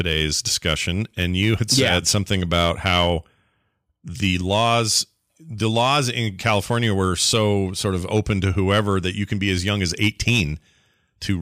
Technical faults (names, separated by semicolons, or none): hard clipping